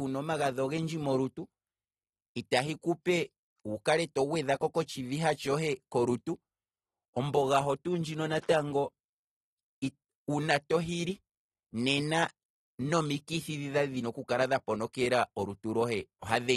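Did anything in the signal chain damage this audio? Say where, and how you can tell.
Yes. The damage sits at the codec stage and runs through the whole speech clip. Nothing survives above about 12.4 kHz, so the top end is sliced off flat, and the sibilants and held vowels have that watery, fizzy smear you get when a coder starves the upper bands. That points to AAC compression, likely AAC-LC at something near 37 kbps, where too few bits force a lowered cut-off and coarse quantisation of what's left.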